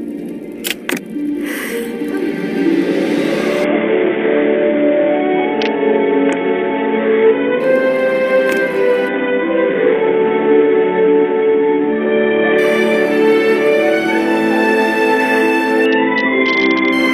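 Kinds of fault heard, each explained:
Bluetooth SBC bit pool drop: a congested wireless link made the sender sharply cut the SBC bit pool, a fall that sounds consistent with going from around 31 down to about 6, which fits a stream of roughly 55 kbps. Starved of bits, the encoder leaves the upper sub-bands nearly empty and quantises the rest coarsely, so the treble dulls and a gritty grain rises from 3.64 to 7.60 s, 9.09 to 12.58 s and 15.86 to 16.93 s.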